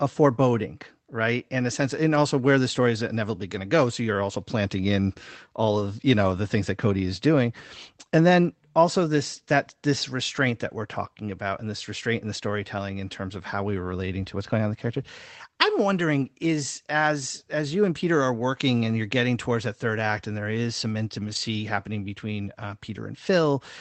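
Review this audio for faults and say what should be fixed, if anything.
Two spots show a lost packet rebuilt from error correction, at 13.87 to 13.89 s (20 ms) and at 21.19 to 21.37 s (100 ms, which fits a run of five 20 ms packets). The speech stays continuous but turns briefly rough and noisy, because the decoder played the low-bitrate Opus copy carried in the following packet. Plain loss concealment would instead smear or repeat the preceding sound, or fade it out. Reducing packet loss on the network path would prevent it.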